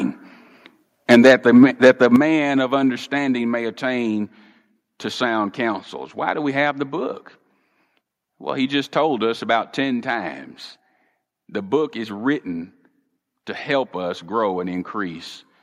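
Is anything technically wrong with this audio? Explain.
Yes. From 1.1 to 2.16 s there's what sounds like microphone overload. The loudest peaks have flattened, crackly tops, roughly a few percent of samples. That's likely an input level set about 10 dB too hot, driving the converter past full scale.

There are also two sudden level drops where the microphone volume stepped down, one at 1.15 s (about 4 dB) and one at 2.16 s (about 8 dB). Voice and background fall together each time, which points to the call software cutting the input gain in response to the clipping.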